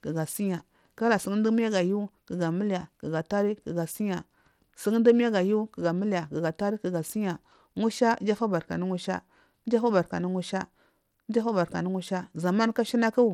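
Throughout this speech clip the treble sounds thin and unsteady, with a gritty, grainy noise riding on the voice and nothing above about 17.4 kHz. This is likely Bluetooth SBC compression at a low bitrate, which fits roughly 96 kbps, starving the upper sub-bands of bits.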